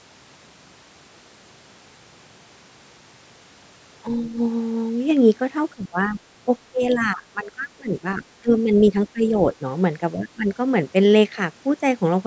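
From 5.74 to 6.19 s, 6.71 to 8.24 s, 8.41 to 8.94 s, 9.13 to 9.36 s and 10.14 to 10.5 s, the speech sinks by around 15 to 20 dB, the longest dip lasting about one and a half seconds. This is speech suppressed in double talk: the call's echo canceller, likely faced with both parties talking at once, turned down the near talker along with the echo.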